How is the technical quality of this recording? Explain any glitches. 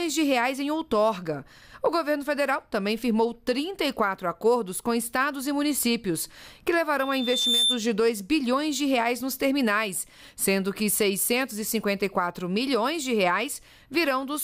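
The recording has one clear glitch, a loudspeaker feedback squeal from 6.99 to 7.83 s. The microphone re-captured its own loudspeaker, and loop gain above unity at 3.6 kHz let that tone grow over roughly half a second to a few decibels above the sound. A spectrogram would show a bright horizontal line at 3.6 kHz, and the waveform a swelling envelope.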